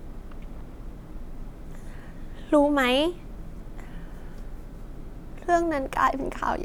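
Nothing in this speech recording stands out as a technical fault; it just runs along without any glitch catching the ear.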